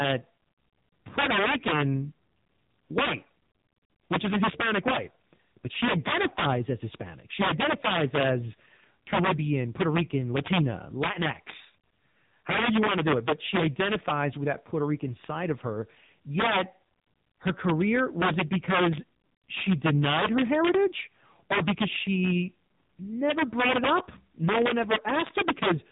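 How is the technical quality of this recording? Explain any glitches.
Poor. Two faults run through the whole speech recording.

Integer overflow, throughout: the level is pushed about 10 dB too hot, and a small fraction of peaks wrap to the opposite sign instead of limiting. Loud syllables carry violent cracks, harsher than clipping.

AMR narrowband mobile codec, throughout: heavy coding damage and nothing above 3.8 kHz. The speech sounds muffled, buzzy and synthetic, which fits a low mobile bitrate around 6.7 kbps.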